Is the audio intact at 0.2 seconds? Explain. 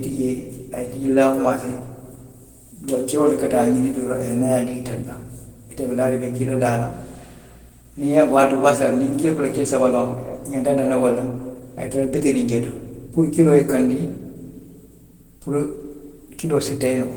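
No, at 0.2 s you're hearing Opus compression, and it runs through the whole clip. The speech is muffled and hoarse with a grainy edge, likely from Opus in its hybrid speech mode, squeezing bits the way a rate around 16 kb/s would.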